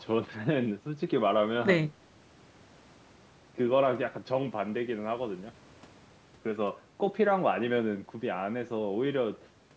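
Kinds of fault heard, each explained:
No fault can be heard in this speech. It has passed through call microphone processing, which leaves nothing above 8 kHz and trims away the lowest bass.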